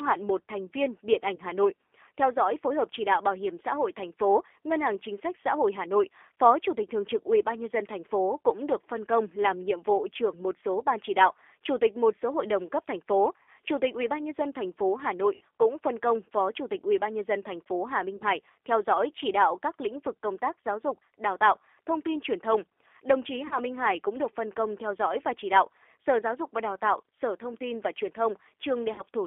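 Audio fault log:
Throughout: G.729 codec. The speech is squeezed into a narrow telephone band of roughly 300 Hz to 3.5 kHz at 8 kbit/s. It's rebuilt from a vocal tract filter plus a few pulses per frame, so it sounds a bit rough and synthetic, and the damage is plainly audible.
1.36–1.40 s, 13.43–13.47 s, 15.35–15.41 s, 18.17–18.24 s, 23.47–23.58 s, 28.94–29.02 s: VoIP packet loss concealed by the speech codec. About 20 ms is lost at 1.36 s, 60 ms at 15.35 s, and 40 ms at each of the others. The decoder fills the gaps by stretching its last pitch and filter at falling gain, which gives a buzzy tone or coloured noise that fades. The sound then stays weak or distorted as the frames recover.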